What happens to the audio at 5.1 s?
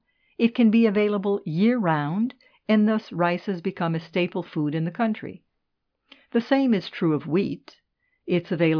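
At 5.1 s the speech carries on without any audible fault: no dropout, click, distortion or glitch.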